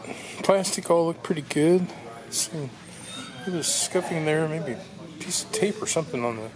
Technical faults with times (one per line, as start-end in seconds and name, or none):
none